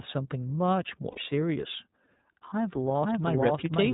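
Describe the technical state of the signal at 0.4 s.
At 0.4 s the speech is passing through the iLBC codec, which applies to the whole clip and cuts everything above 4 kHz. The plainly audible roughness fits 30 ms frames at 13.33 kbps, coded independently and sounding slightly synthetic.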